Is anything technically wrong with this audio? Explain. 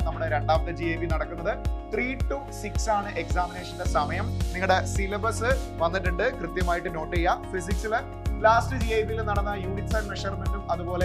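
No, nothing technically wrong can be heard here.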